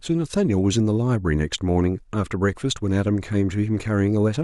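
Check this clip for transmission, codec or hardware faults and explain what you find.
There's one fault here: a spot of compressed frames skipped in the speech at 3.85 s. The decoder didn't play a chunk of the compressed stream, either because it was missing or rejected as corrupt, so the audio jumps ahead. The gap sounds like roughly one frame, around 20 ms, which fits a 20 ms frame size.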